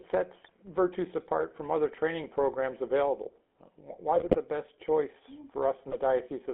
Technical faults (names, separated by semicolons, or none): GSM full-rate codec; GSM bit errors